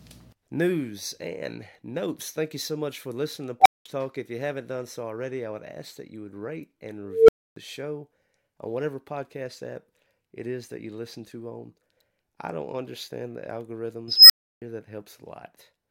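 An unstable filter erupts at 3.60, 7.05 and 14.08 s. A recursive filter runs away. A tone near 700 Hz, 500 Hz, then 5 kHz swells, clips, and cuts to silence.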